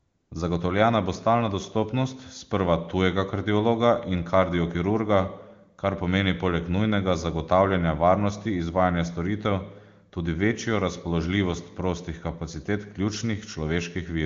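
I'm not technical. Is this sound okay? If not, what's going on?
No. For the first 0.31 seconds, before the speech starts, the background is a smooth, even hiss rather than real room sound. That is AMR comfort noise. The phone treated the opening as silence and sent no speech, so the receiving end filled the gap with artificial noise.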